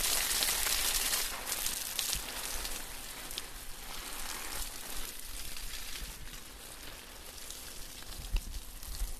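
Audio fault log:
No faults heard at any point in the recording.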